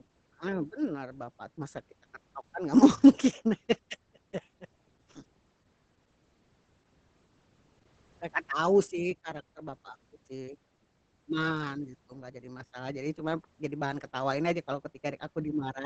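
Speech with heavy Opus voice compression throughout: nothing above 8.8 kHz, muffled, hoarse and slightly robotic, consistent with SILK-mode wideband coding at roughly 10 kbps.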